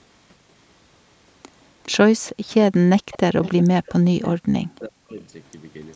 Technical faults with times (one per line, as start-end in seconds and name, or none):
1.83-1.92 echo leak
2.27-2.32 echo leak
2.70-2.90 speech suppressed in double talk
3.11-4.30 echo leak
3.33-5.18 speech suppressed in double talk